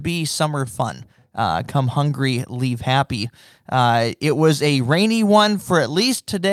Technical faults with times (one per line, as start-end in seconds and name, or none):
0.00-6.52 clock drift between sender and receiver
0.08-6.10 repeated timing corrections